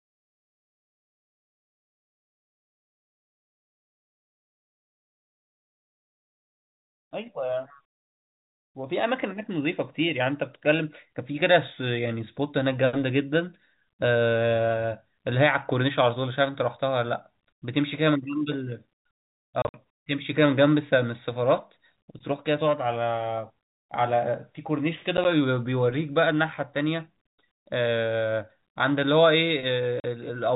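Packet loss filled with silence chops the speech at 19.62 to 19.74 s, 25.17 to 25.25 s and 30.00 to 30.04 s. Lost packets become hard-edged gaps in multiples of what sounds like 10 ms packets.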